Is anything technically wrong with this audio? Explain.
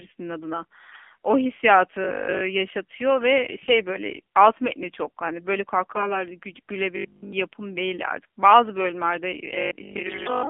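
Yes. The speech has passed through an AMR narrowband mobile codec at 7.4 kbps, squeezing it into a 200 Hz to 3.4 kHz band and a sparse pulse-driven vocal model, so it sounds thin, buzzy and synthetic throughout.

AMR bit errors strike at 0.88 to 1.09 s, 3.52 to 3.73 s, 5.92 to 6.24 s and 10.06 to 10.32 s. A few percent of the weakly protected bits were flipped, misplacing excitation pulses, so the voice briefly turns hoarse, scratchy and gargly while keeping its pitch.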